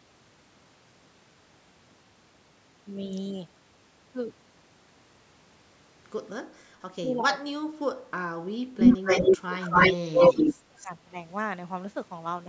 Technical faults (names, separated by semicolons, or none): speech suppressed in double talk; echo leak